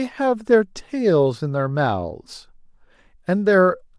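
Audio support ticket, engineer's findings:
Nothing stood out on listening; no findings to log for this speech clip.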